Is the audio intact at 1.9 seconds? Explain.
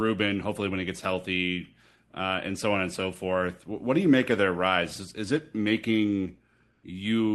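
Yes, the speech at 1.9 seconds is intact, with nothing there beyond the ordinary sound of the call codec carrying it.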